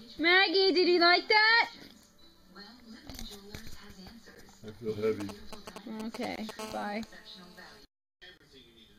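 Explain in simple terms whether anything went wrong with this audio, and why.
Three problems can be heard. From 5.20 to 6.51 s there are GSM signalling bursts. A nearby 2G phone is talking to its network, and the audio circuit picks this up as galloping ticks and short buzzes at 217 Hz.

Two gaps between stream segments cut in, at 6.36 to 6.38 s and at 8.38 to 8.40 s. These are hard-edged holes of about 22 and 28 milliseconds. The stream's timing left a small space between pieces, and the player filled it with silence. No sound is missing.

From 6.59 to 7.80 s there is a GSM phone buzz. The phone is now in a call, sending steady radio pulses 217 times a second. This makes a constant raspy 217 Hz buzz.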